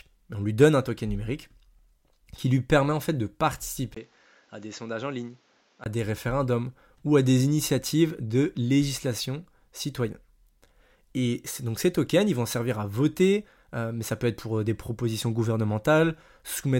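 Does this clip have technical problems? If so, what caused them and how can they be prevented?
Yes. The input likely switched to a poorer device from 3.95 to 5.86 s. After a 20 ms gap, the speech loses everything above 7.6 kHz, drops roughly 10 dB and gains new background noise. Fixing the recording input to one microphone and disabling automatic device switching prevents this.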